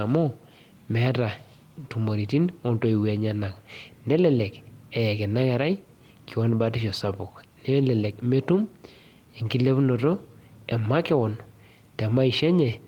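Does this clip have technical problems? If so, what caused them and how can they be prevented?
No, nothing in this speech recording stood out as a technical problem on listening, so there is nothing here that calls for a fix.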